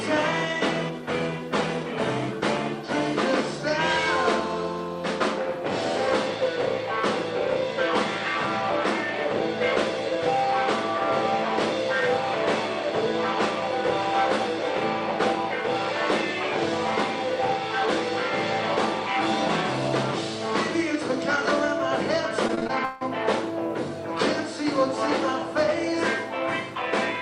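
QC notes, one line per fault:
22.47–23.03 s, repeated packet loss (robotic sound): six holes in half a second, the longest 157 ms, each patched by extending the preceding sound. The patches cover 46% of the stretch, producing choppy sound with pieces missing rather than one clean dropout or steady distortion.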